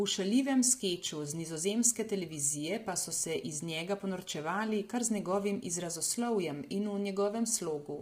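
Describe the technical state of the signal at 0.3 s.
At 0.3 s the speech already has the rough, grainy quality that runs through the whole clip, with noise filling the gaps between harmonics and a thin, synthetic-sounding top end. That's likely low-delay AAC compression: it codes about 500 frequency lines a frame with a low-delay window, and the damage fits heavy AAC-ELD coding around 24 kbps.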